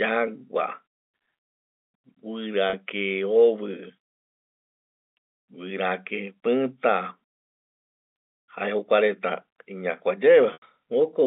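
Speech over a telephone-band G.711 line, with two brief glitches. At 2.70 s the sound holds for about 30 ms as a slightly buzzy, frozen note. At 10.53 s a 90 ms gap fades toward silence before speech cross-fades back. Both are packet loss with pitch repetition: the receiver bridged missing audio by repeating the last pitch period, and the longer gap fits about three lost packets.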